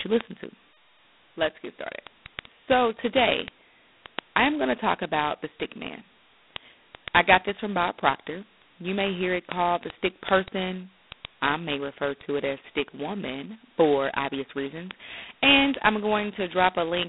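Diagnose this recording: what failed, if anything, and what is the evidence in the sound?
The failure is at the codec stage: G.726 ADPCM throughout the speech, with a harsh, rasping hiss that rises and falls with the speech level, a line band of 200 Hz to 3.7 kHz, and nothing above 3.9 kHz. Such heavy damage fits 16 kbit/s, where coarse 2-bit prediction differences leave level-tracking noise rather than the watery swirl of perceptual codecs.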